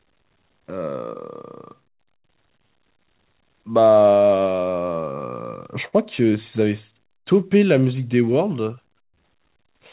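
Clock drift between sender and receiver runs through the whole clip. The sending side's clock seems to run about 3% slow, so the receiver's jitter buffer keeps draining and must be topped up. Unlike a single network glitch, this yields uneven, recurring hiccups rather than one event.

From 0.03 to 4.94 s, repeated timing corrections stretch the speech to about 97% speed, adding roughly 150 ms by repeating short slices. It sounds like a faintly unsteady, dragging tempo. What separates it from a stall is that no individual sound freezes; the slowing is spread thinly.

At 5.88 to 5.95 s comes a short stall from a late packet. The buffer ran empty, and the receiver held the last sound for 47 ms until the packet arrived, then resumed without losing anything. It is heard as one briefly sustained sound with a slight buzz or dip, not a gap or a skip.

From 7.19 to 9.55 s, the repeated timing corrections return at the same 97% speed, adding around 70 ms. 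This plays over the band-limited sound, with nothing above 4 kHz, which fits a 64 kbps G.711 A-law call path.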